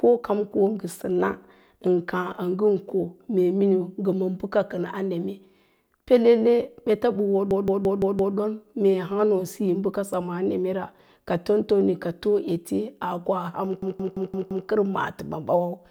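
A speech recording with a system hang loop at two points, 7.51 to 8.36 s and 13.82 to 14.68 s. Each time, a 0.17 s slice repeats exactly five times, a machine-gun stutter at about 5.9 per second, which fits an 8192-sample ring buffer replayed while the driver was frozen. Unlike dropouts or network jitter, the repeats are identical and strictly periodic, and essentially no speech is missing afterwards.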